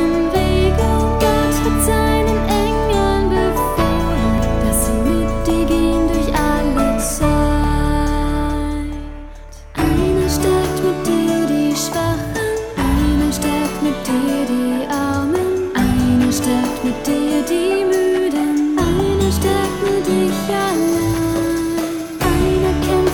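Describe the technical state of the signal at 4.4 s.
At 4.38 s the sound makes a small forward jump with no silent gap, likely a dropped buffer (overrun): a sliver under two milliseconds was overwritten and both sides spliced together.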